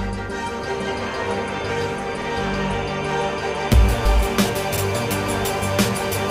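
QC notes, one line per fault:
4.77–4.82 s, overlapping chunks: a brief stutter with a click, where about 50 ms of sound is heard twice in quick succession before playback carries on. The audio was handled in chunks of 2.5 s, and at this join the next chunk began before the previous one had finished, so its opening 50 ms duplicated material that had just played. The abrupt restart of that repeated slice produces the click at the seam.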